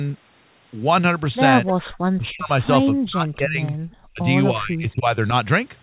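Speech, heard through a narrowband call path with nothing above 4 kHz, which fits a G.711 telephone codec. Echo leak appears three times: 1.66 to 1.73 s, 1.92 to 1.98 s, and 3.66 to 3.72 s. Each is a short, delayed copy of the speech, trailing it by about 0.3 s. The first scrap is about 15 dB below the speech. The other two are much fainter, around 30 to 35 dB down. The likely cause is a far-end loudspeaker whose echo canceller let part of its microphone pickup pass back into the call. Speech suppressed in double talk also occurs four times. The speech dips from 2.16 to 2.52 s, 2.92 to 3.73 s, 4.13 to 4.22 s, and 4.52 to 5.32 s. The deepest drops are about 40, 35, 30 and 20 dB. In these stretches the talker fades or partly cuts out. The echo canceller likely could not tell this speech from the echo while both sides overlapped, so it turned everything down.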